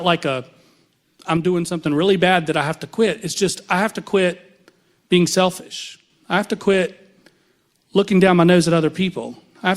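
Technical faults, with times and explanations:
1.37–1.86 s and 5.60–6.10 s, one channel drops out: a stereo channel is likely lost for about half a second each time, so the mono sum drops abruptly by about 6 dB, then recovers just before "really bad that I" and "I have to quit".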